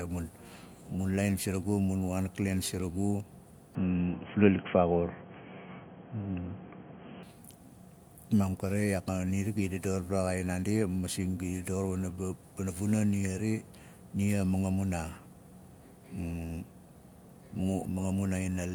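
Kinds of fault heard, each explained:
Input switched to a poorer device: the recording system likely moved its input onto a lower-grade microphone or a headset's call profile from 3.75 s to 7.23 s, then back. That device passes nothing above 3.3 kHz, so the speech turns dull and boxy. The level also shifts by around 5 dB, and a faint new background noise sits well below the signal. The switch happens with no gap, and full clarity returns at 7.23 s.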